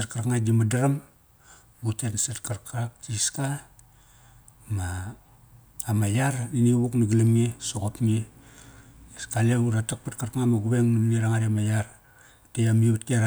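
No technical faults can be heard anywhere in the speech. Nothing breaks, jumps or drops out at any point in the recording.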